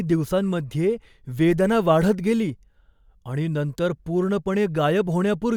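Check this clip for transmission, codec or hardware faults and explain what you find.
No faults turn up anywhere in this speech recording. There is nothing to point to at any moment in it.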